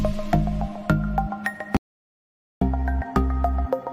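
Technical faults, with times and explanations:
1.77–2.61 s, audio dropout to silence: input was likely lost while recording continued writing silence, so sound cuts to total silence, without room tone, for 0.85 s.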